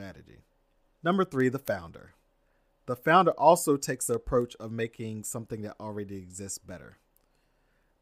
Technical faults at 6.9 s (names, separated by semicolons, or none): word clock ticks